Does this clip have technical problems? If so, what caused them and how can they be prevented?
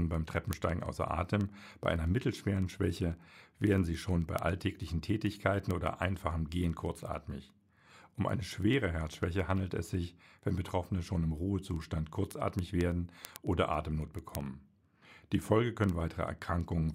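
Yes. Word clock ticks run steadily from 0.14 s to 16.94 s, roughly twenty a second. The receiver isn't locked to the sender's clock, and they drift a few hundred ppm apart, so a single sample keeps slipping. Slave the receiver to the incoming clock.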